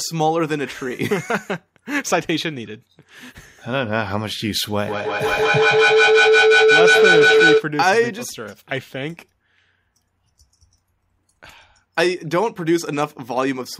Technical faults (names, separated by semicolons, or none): feedback howl